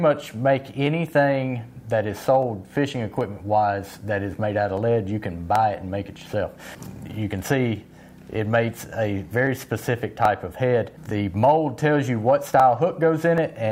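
From about 0.87 s to 13.38 s there's a steady tick, a click recurring every 0.78 s, some fifteen of them in all, evenly spaced across that stretch. That regularity points to clock drift buffer slips, most likely two devices running on their own clocks that disagree by a few hundred ppm. The buffer between them creeps full or empty until a short chunk, roughly 15 samples, gets dropped or repeated, and each of those jumps is one of the clicks.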